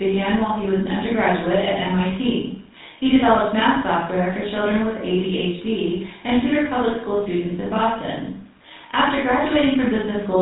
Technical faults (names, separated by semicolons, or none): GSM full-rate codec